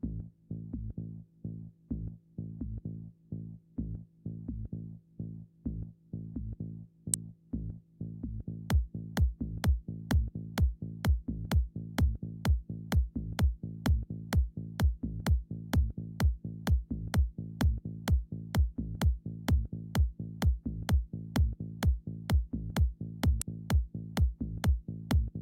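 Two sharp snaps sit on top of this recording of sounds, at 7.14 s and 23.42 s. These are electrical switching spikes, the first peaking near -10 dBFS and the second a little quieter, around -15 dBFS. The likely cause is a nearby switch or motor arcing and the audio line picking it up. Unlike a digital dropout or buffer click, the underlying sound carries on uninterrupted beneath each snap, with no gap or jump.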